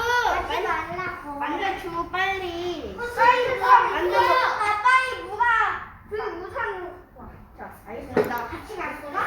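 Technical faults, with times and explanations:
Nothing technical to flag here; the audio comes through without any faults worth noting.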